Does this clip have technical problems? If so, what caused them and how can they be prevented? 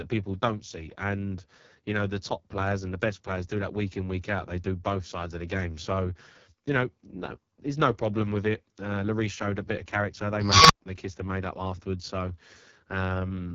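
Yes. Throughout the speech sounds rough and raspy, with nothing above about 7.7 kHz. This is heavy AMR wideband (HD Voice) codec damage, which points to the lowest rate, around 6.6 kbit/s, where the pulse model cannot capture detail. Using 12.65 kbit/s or higher prevents it.

From 10.41 to 10.81 s, a high tone near 5 kHz swells over about 282 ms into a loud squeal, then cuts to roughly 117 ms of silence. This is an unstable filter: bad recursive coefficients made its output grow until it clipped and overflowed. Checking coefficients for stability before applying them prevents it.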